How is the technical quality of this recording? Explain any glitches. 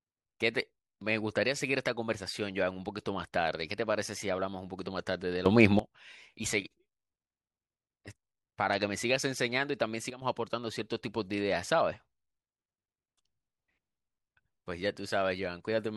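The recording has two level glitches. From 5.46 to 5.79 s the speech and background noise leap about 14 dB louder together, and from 10.10 to 10.22 s they drop about 11 dB. Each is a sudden gain jump, likely digital gain changing between samples without a ramp.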